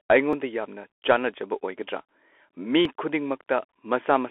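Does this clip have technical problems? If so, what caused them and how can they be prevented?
Yes. The Bluetooth CVSD headset codec runs throughout. Its one-bit delta coding, consistent with a 64 kbit/s link, cuts everything above 4 kHz, roughens sibilants and adds a granular hiss, unlike the clean band edge of a plain telephone filter. A wideband codec such as mSBC or LC3 would prevent this.

Dropped buffers (overrun) cause a small forward jump at 0.33 s, just before "ꯌꯥꯝꯅ ꯆꯥꯅꯖꯕ", and at 2.85 s. Each likely comes from about 5 ms of unread input being overwritten. There is no gap of silence, which is what sets this apart from an underrun. Larger buffers and a higher-priority capture thread would prevent it.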